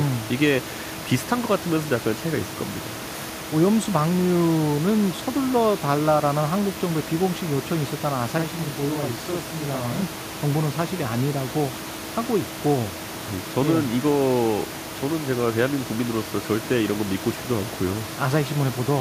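Channel delay (doubling) appears from 8.38 to 10.02 s of this speech. One channel falls behind the other by 42.67 ms, which fits a 2048-sample buffer, and when the two are folded to mono the late copy sits on top of the original at equal level. Over that stretch each syllable sounds doubled, with a short slap following it. The room noise sits about 14 dB below the speech.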